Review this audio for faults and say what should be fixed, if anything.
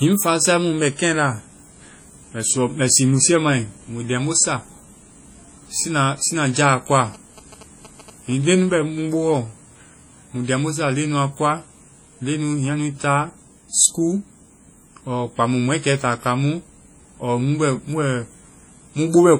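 Throughout the clip, the speech was likely passed through a WMA encoder at a low bitrate, consistent with about 32 kbps. Its long transform blocks smear quantisation noise over tens of milliseconds and drop weak spectral detail, so the speech carries heavy ringing, a washy texture and hiss that swells and fades with the voice. Encode from the original source at a higher bitrate, or with a better codec, rather than re-encoding this low-rate WMA file.

From 7.05 to 8.48 s, a nearby 2G phone sending signalling bursts had its radio energy rectified by the audio circuit. This produces a galloping dit-dit-dit of short buzzes repeating at about 217 Hz, sitting roughly 20 dB below the speech. Keep mobile phones away from the microphone, cables and interface, or switch them off during recording.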